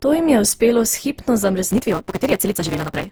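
Throughout this speech clip the sound is swirly, smeared and hollow, with blurred consonant attacks. That is more degraded than a single lossy encode near 48 kbit/s would leave it. The cause is likely generation loss: the audio was decoded and re-encoded with Opus around ten times, and each pass quantised on a shifted frame grid, so noise and spectral gaps piled up. From 1.71 s to the end, a steady 188 Hz buzz appears and the speech rushes ahead 1.88 times faster while its timbre stays the same. This is a block size mismatch (truncated): one stage writes longer blocks than the next reads, so the tail of each block is discarded. The resulting seam at the block rate makes the buzz, and the lost material shortens the timeline. The figures fit a 256-sample read block at 48 kHz.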